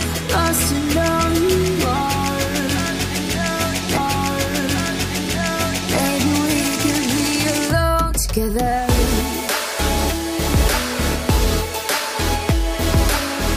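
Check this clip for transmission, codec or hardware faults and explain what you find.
There's one transmission fault here: a repeated stream segment. At 3.96 s the player jumps back and replays about 2.0 s of the sound, running to 5.96 s, with a small blip at the join. It got the same chunk twice, fetched or queued again, so that stretch simply plays a second time.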